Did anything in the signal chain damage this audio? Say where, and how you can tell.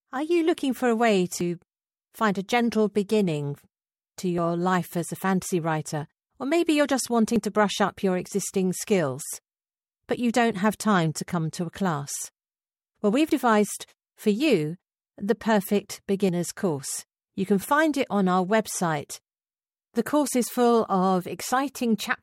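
Yes. The speech skips briefly at 1.41, 7.36, 13.31 and 16.29 s. Each skip loses roughly 20 ms, with the two sides joined directly. The skips sit on a 3-second grid. This is likely audio missing between chunks, lost at the recorder's buffer boundaries.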